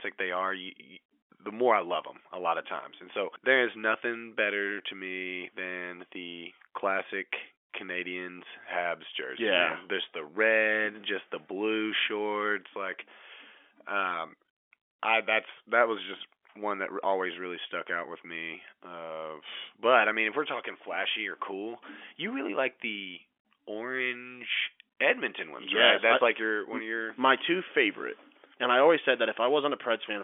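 No faults are audible in the speech, which carries the narrow band of a G.711 mu-law telephone line, roughly 300 Hz to 3.4 kHz, with at most faint codec damage.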